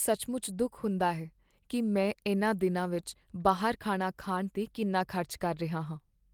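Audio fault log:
No technical faults can be heard anywhere in the signal.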